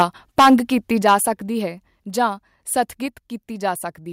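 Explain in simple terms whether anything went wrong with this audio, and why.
The loudest moments sound harsh and crackly, at 0.00 to 0.03 s, 0.38 to 0.55 s and 1.06 to 1.15 s. This is microphone overload. The microphone was likely set too loud. So the tops of the biggest sounds got chopped flat. The middle stretch is the worst.

The speech also gets suddenly quieter in small jumps, at 0.02 s, 1.02 s, 2.04 s and 3.06 s. This is the microphone volume being stepped down. The call software likely reacted to the overload by turning the input down. Everything drops together. The jump at 1.02 s is the biggest.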